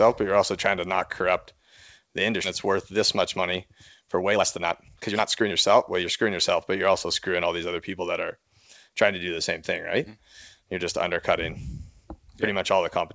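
At 2.44 s a skip ahead occurs. A stretch of incoming audio was discarded, most likely as the jitter buffer overflowed with later audio already queued. Roughly a second and a half of speech never plays, and the sides of the cut are butted together with no gap or fill, so the sound lurches forward abruptly.

Right after, the receiver still holds more buffered audio than its target, so it applies jitter buffer speed-up, cutting out short pitch-period slices one after another to drain the excess. From 2.67 to 5.52 s playback runs at 126% speed, shedding roughly 700 ms, and the speech sounds clearly rushed while its pitch stays put. Milder passes follow, at 105% from 6.02 to 7.73 s and 107% from 8.36 to 9.05 s, removing about 100 ms and 50 ms and giving only a faint hurried quality. Through all of this the call codec band-limits the audio, with nothing above 8 kHz, which fits G.722.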